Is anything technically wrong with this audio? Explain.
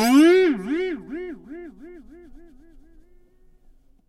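No, nothing technical stands out here; these sounds come through without any audible problems.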